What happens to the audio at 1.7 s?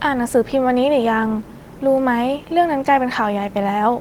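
Nothing goes wrong at 1.7 s: the speech there carries on intact, with no dropout, click or other fault.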